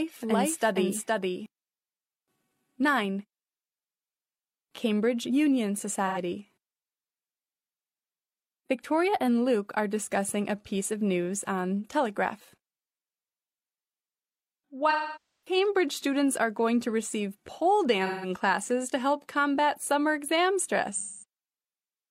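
From the very start until 1.46 s, a doubled audio track runs: a second full-band copy, roughly as loud as the original, trails it by about half a second, most likely because the same signal arrived again through a slower path. It has no decay or room colouring and cuts off abruptly at 1.46 s. On a spectrogram, every feature appears twice at a fixed horizontal offset. The waveform shows overlapping, denser envelopes that thin out suddenly.

AAC frame loss with concealment follows at 6.07–6.18 s, 14.90–15.56 s, 18.06–18.29 s and 20.91–21.24 s, with gaps of about 110 ms, 670 ms, 230 ms and 330 ms. These fit runs of two, twelve, four and six lost frames. The decoder covers each gap by reusing the last good spectrum, producing smeared, noisy or phasey patches. The 0.67 s one at 14.90 s decays toward silence and then fades back in. Spectrograms show blurred, time-frozen bands, and the longest gap also shows a fading envelope.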